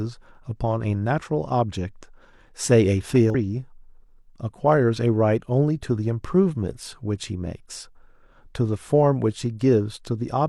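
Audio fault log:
3.30–3.35 s, damaged data in a compressed stream: a short burst of corrupted audio, about 50 ms long, cuts into the speech. Some bytes of the encoded stream at this point were lost or overwritten, so the decoder could not read the frames there correctly and lost sync, then searched for the next valid frame header. The garbled frames play out as a brief non-speech blip before normal decoding picks up again.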